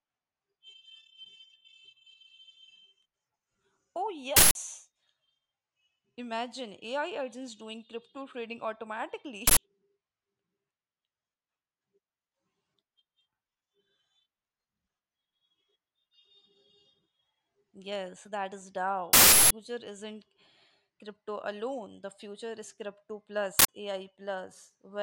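Four uninitialised buffer bursts hit this speech: 4.37 to 4.55 s, 9.47 to 9.57 s, 19.13 to 19.51 s just after "that is", and 23.59 to 23.68 s after "future is crypto". Each is a loud blast of digital noise where stale memory got played before real audio was written, with lengths fitting 4096- to 16384-sample blocks.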